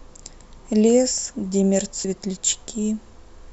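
At 2.04 s the speech jumps forward by about half a second as compressed frames are skipped. The decoder drops whole frames rather than playing them, and the gap points to roughly twenty frames of about 26.1 ms each. The overlapping neighbours produce a short smeared blip, not a hard click.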